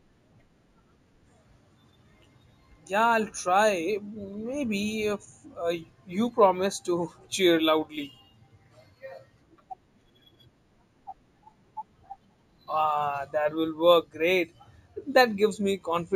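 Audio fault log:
throughout: imaging from linear upsampling. Sibilants carry a faint metallic shimmer over a dulled top end. The sound fits 16 kHz speech raised to 48 kHz by straight-line interpolation, a weak filter leaving a mirrored spectrum copy between 8 and 16 kHz, roughly 30 dB down.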